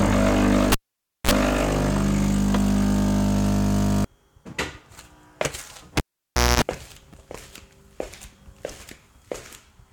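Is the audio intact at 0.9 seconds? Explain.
No. At 0.9 s the sound falls inside a cable pulled and plugged in event from 0.72 to 1.31 s. A pop opens about 0.54 s of near silence, then a 42 ms burst of 60 Hz mains buzz as the plug tip touches, and a second pop.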